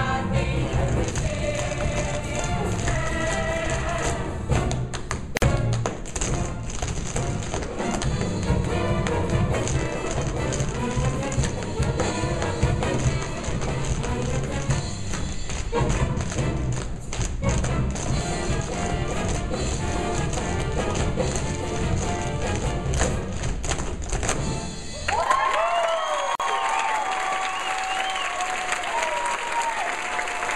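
At 5.37 s and 26.35 s, the sound drops out for about 50 ms and 45 ms. Each is a gap at a join of encoded pieces, where padding silence stayed in. Edges are smeared.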